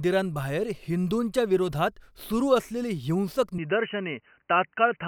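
At 3.58 s the input most likely switched to a poorer device, such as a second microphone or a headset's call profile, and the recording stays on it to the end. This device passes nothing above 3 kHz, so the speech abruptly turns dull and boxy with its upper range gone. The change is instant, with no gap at the switch, and the level stays about the same. A faint new background noise sits well below the speech.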